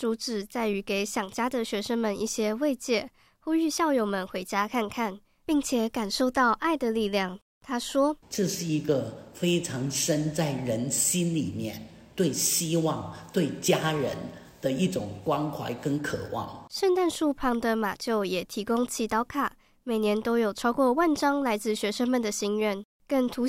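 No technical faults can be heard anywhere in this recording.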